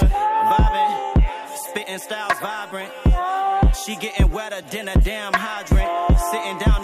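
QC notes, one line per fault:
No fault found.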